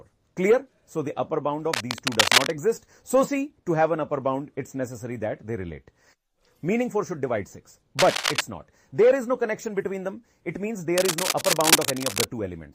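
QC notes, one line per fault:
1.73–2.54 s, 7.98–8.41 s, 10.98–12.26 s: cable scratch noise. Dense, irregular crackling bursts sit over the audio at roughly the same level as the programme. This is likely a worn cable or connector being moved, its contact resistance fluctuating rapidly.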